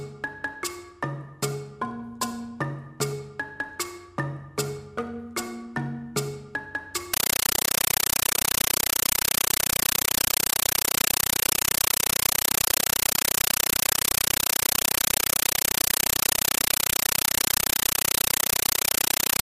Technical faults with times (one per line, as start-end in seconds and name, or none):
7.13-19.44 compressed stream played as audio